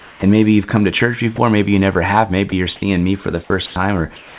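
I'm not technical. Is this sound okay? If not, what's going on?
No, there are gaps and patches of fake background in this speech.

Comfort noise in place of the background: from 0 to 0.22 s and from 4.16 s to the end, the real room sound is replaced by a smooth, featureless hiss that is quieter. The likely cause is the sender pausing transmission during silence, so the receiver fills in the gap with artificial noise.

Onset clipped by the voice detector: between 0.19 and 0.22 s, the first 30 ms of speech is missing, so the opening sound starts abruptly. The likely cause is the sender's speech detector reacting too slowly and not sending that first sliver.

Sound dropped by the voice detector: at 1.36–1.38 s, 2.50–2.52 s and 3.66–3.76 s, short bits of speech give way to the same flat hiss and then return. The likely cause is the detector briefly treating part of the speech as background and stopping transmission. 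The phone-style call link also removes everything above 4 kHz.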